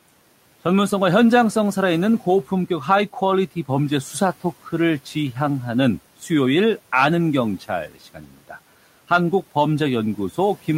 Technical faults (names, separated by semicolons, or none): speech cut by the noise suppressor